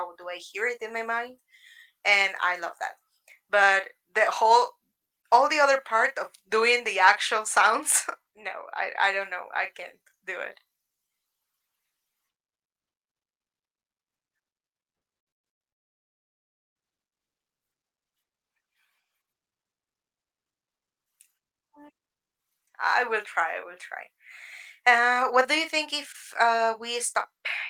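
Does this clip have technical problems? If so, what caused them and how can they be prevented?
Yes. From 14.95 to 15.62 s there is repeated packet loss, heard as choppy, robotic speech. Four gaps, the longest 110 ms, were patched by stretching the last sound. A jitter buffer and forward error correction help prevent this.

From 15.71 to 16.77 s, about a second of speech is gone and only silence remains. The likely cause is a long network dropout. A more stable connection, such as wired rather than congested Wi-Fi, helps prevent it.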